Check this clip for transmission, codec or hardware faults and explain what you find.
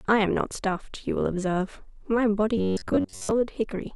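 There's one fault, from 2.57 to 3.31 s: robotic sound from repeated short buffers. The speech collapses into a stiff, metallic buzz at about 93.8 Hz. That's likely audio arriving too late, so a slice of roughly 10.7 ms gets looped over most of that stretch.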